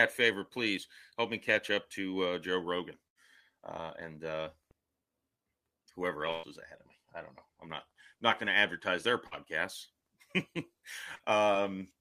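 At 3.07 to 3.18 s, just before "uh and uh", there's a burst of packet loss: about 80 ms never arrived, so the receiver stretches the last sound into a fading smear and jumps ahead. It happens again at 6.31 to 6.46 s, a longer 120 ms gap right before "is ahead of me". Then come two short concealed packet losses, each about 40 ms: at 9.27 s after "advertise their", and at 11.15 s. Both are patched by extending the preceding sound, leaving a quick wobble or smudge.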